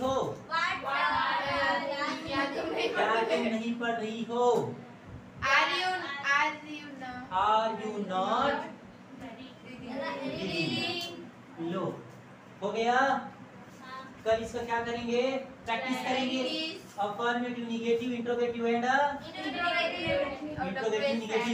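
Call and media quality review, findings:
No call or media quality issues found in this review.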